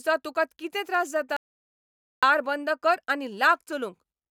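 A speech recording with an audio dropout to silence from 1.37 s to 2.23 s: just after "तुका कितें त्रास" the sound stops mid-flow and returns at "बंद कर आनी", with about 0.86 s of speech missing. Unlike a natural pause or a noise gate closing, the gap holds no room tone at all, only silence, and the voice is cut rather than tailing off. The likely cause is a momentary loss of the input signal.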